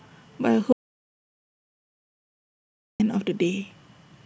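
At 0.73 s the speech drops straight into dead digital silence and stays there until 3.00 s, so roughly 2.27 s is simply gone. It's an audio dropout to silence, likely the input cutting out while the recorder kept writing zeros, with no room tone at all.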